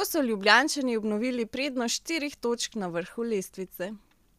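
No technical faults can be heard anywhere in the recording of speech, with the signal holding steady and continuous throughout.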